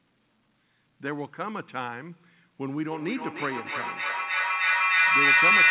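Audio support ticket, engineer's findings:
Feedback howl from 2.87 s to end of clip. Tone near 2 kHz, loop delay roughly 0.3 s, peaking about 12 dB above speech. Acoustic loop between two devices in one room on the same call, mic to speaker with net gain each pass. Never decays, never muted. Call path band-limited to 4 kHz, consistent with narrowband G.711 at 64 kbps, so the howl sits well within the available band.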